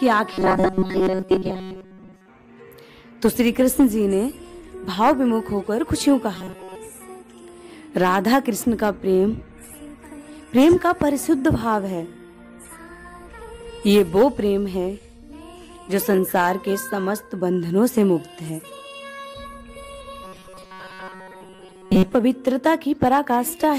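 Audio delivery likely stalled repeatedly, with the software looping a buffer of about 5 ms to fill each gap, producing robotic sound from repeated short buffers at 0.34–2.28 s, 6.35–6.75 s and 20.24–22.14 s. Most of the sound there is skipped, replaced by a rigid metallic buzz at 188 Hz.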